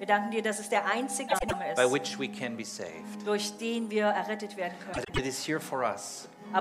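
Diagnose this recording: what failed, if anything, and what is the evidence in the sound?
Frames out of order in the network stage, at 1.28–1.54 s and 4.93–5.19 s. Each stretch plays two adjacent 104.5 ms blocks swapped. This gives a garbled flutter. No time is lost.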